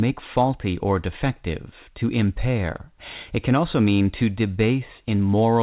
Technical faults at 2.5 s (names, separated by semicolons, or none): none